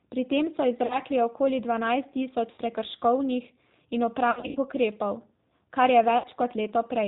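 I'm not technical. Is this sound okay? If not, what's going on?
No. The call was squeezed through the G.729 codec, a phone-network method that shrinks speech by rebuilding it from a rough model of the voice and discarding everything above 4 kHz. That makes the speech sound noticeably rough, slightly robotic and dull throughout. The words stay clear, but the natural brightness and smoothness of a real voice are gone for the whole clip.

There was also VoIP packet loss concealed by the speech codec. Small chunks of audio never arrived, so the receiving end guessed by stretching the last bit of voice it had, fading it out. You hear brief buzzy or smeared patches at 0.86 to 1.0 s, between "tem so" and "okoli dvanajst"; at 2.52 to 2.6 s, just after "okoli dvanajst"; at 4.31 to 4.58 s, with several gaps just before "ukrepov kar"; and at 6.18 to 6.27 s. The voice may sound weak for a moment afterward.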